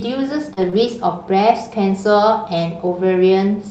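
From 0.53 to 0.66 s there is a short concealed packet loss: roughly 40 ms of audio never arrived in time, and the receiver bridged it with about 31 ms of synthesised continuation, extending the preceding sound before crossfading back, which stretches that passage by about a hundredth of a second. It is heard as a brief smear or wobble. A second, smaller concealment follows at 0.70–0.74 s, where a 20 ms hole is filled with 23 ms of extrapolated sound, giving a short smear.

Interleaved with these are losses rebuilt from error correction. At 0.57–0.68 s and again at 0.74–0.84 s, stretches of about 60 ms each were lost but recovered from the low-bitrate redundant copies carried in the following Opus packets, so nothing drops out. Those frames are audibly coarser and noisier than their surroundings. A single 20 ms rebuild at 1.90–1.92 s produces a brief grainy patch. The call path's roughly 8 kHz audio bandwidth at 40 kbps sets the overall high-frequency limit.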